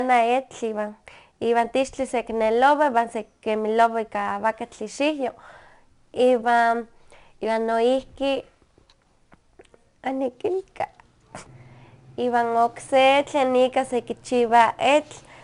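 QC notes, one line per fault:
throughout: 4-bit ADPCM compression; gritty hiss rides on louder speech, nothing above 10.6 kHz, from coarse 4-bit prediction steps at a reduced sample rate.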